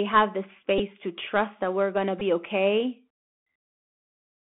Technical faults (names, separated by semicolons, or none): Bluetooth CVSD headset codec; Bluetooth headset packet repeated